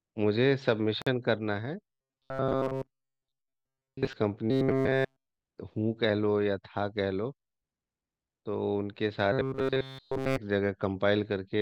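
A hole about 49 ms long opens in the speech from 1.02 to 1.07 s, with smeared edges, before the sound resumes where it stopped. This is a gap at a join of encoded pieces, where separately encoded segments were butted together with their encoder delay and final-frame padding left in. From 1.93 to 4.13 s, 4.51 to 5.26 s and 9.33 to 10.38 s, the voice becomes a rigid metallic buzz fixed at 133 Hz, affecting most of the first stretch and all of the later two. This robotic sound is likely from repeated short buffers: new audio arrived too slowly, so a slice of roughly 7.5 ms was looped, imposing that pitch.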